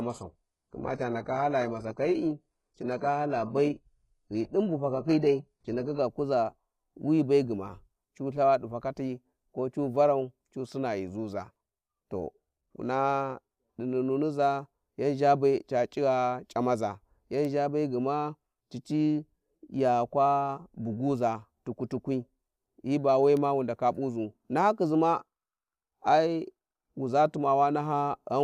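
Speech clip whose opening, from 0.0 to 6.0 s, shows an adaptive stream starting at a low bitrate: dull, synthetic treble and stronger artefacts, which fits a roughly 12 kbit/s HE-AAC start, before quality jumps without a gap around "kuza wi be gma". On a spectrogram, the opening shows no content above 11.5 kHz.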